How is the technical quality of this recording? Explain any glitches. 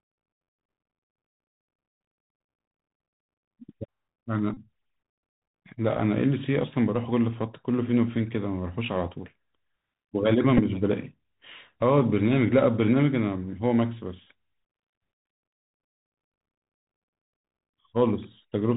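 The quality is poor: the whole recording went through a narrowband Bluetooth headset link, and it has three short buzzing dropouts.

Bluetooth CVSD headset codec, throughout: the speech was coded at one bit per sample at 64 kHz, tracking the waveform up or down with an adapting step. Nothing above 4 kHz survives, s sounds come out scratchy, loud bright sounds distort, and a granular hiss sits underneath.

Bluetooth headset packet repeated, at 4.54 to 4.58 s, 10.57 to 10.60 s and 14.28 s: voice packets were lost, and the decoder replayed the previous packet's bits in their place, covering about 30, 11 and 15 ms. Each repeat lasts 3.75 ms, so each gap becomes a brief buzz near 267 Hz.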